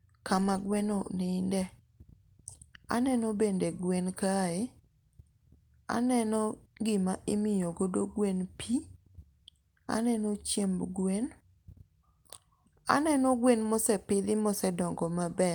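Speech recording; no technical fault found anywhere in the clip.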